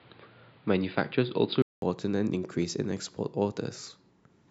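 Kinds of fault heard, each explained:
Input switched to a poorer device: The speech opens dull and boxy, with nothing above 4.9 kHz. At 1.82 s there is a gap of 200 ms, and then the sound clears up with its full top end restored. The first stretch also carries its own faint background noise, well below the speech at around 35 dB down. Loudness barely changes across the switch. The likely cause is the input moving from a narrower-band device to a better one.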